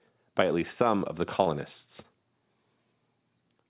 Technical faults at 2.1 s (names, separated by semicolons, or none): short concealed packet loss